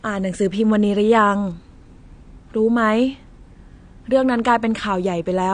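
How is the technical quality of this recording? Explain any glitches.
The recording carries clearly audible lossy-coding damage throughout the speech. Nothing is present above 9.7 kHz, and sibilants sound smeared and fizzy. The likely cause is AAC compression at a low bitrate, consistent with about 32 kbps AAC-LC, where quantisation strips upper bands and leaves spectral gaps.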